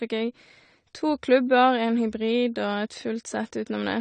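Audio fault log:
Throughout: AAC compression. The speech sounds dull and smeared, with a warbling, fizzy edge on sibilants and nothing above 9 kHz. This is likely low-bitrate AAC-LC, around 32 kbps, which lowers the cut-off and quantises the spectrum coarsely, leaving gaps and noisy fill.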